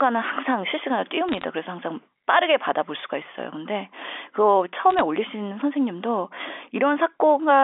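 A brief burst of sharp ticks and crackle sits over the speech from 1.29 to 1.44 s, and a shorter one from 4.90 to 5.01 s. These are bit errors on a digital phone line, at very roughly half a percent to under one percent of bits. Each flipped bit corrupts a single sample of the G.711 mu-law stream. Flips landing on the sign or upper bits throw that sample far off, producing the clicks, while the speech underneath is unchanged.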